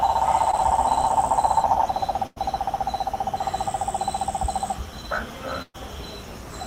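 A recording of everyday sounds carrying network-loss damage. At 0.51 to 0.55 s there is short concealed packet loss: about 20 ms never arrived and the receiver bridged it by extending the preceding sound, heard as a brief smear or wobble. On a spectrogram it shows as a thin band of blurred, repeated texture. Two bursts of packet loss follow, at 2.27 to 2.38 s and 5.62 to 5.76 s, removing about 100 ms and 120 ms. Each time the last sound is stretched into a decaying buzz or hiss before the audio jumps ahead. In the waveform this looks like a tapering envelope, and the second burst decays all the way to roughly 30 ms of flat silence.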